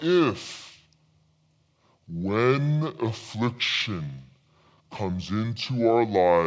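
From start to finish the speech plays back slow and low, the signature of a wrong sample rate: samples pass at a slower clock than they were captured at, with no conversion. Everything runs at two-thirds speed and drops about 7 semitones, which fits material recorded at 24 kHz being played at 16 kHz. Unlike a time-stretch or a pure pitch shift, tempo and pitch fall together by one fixed ratio.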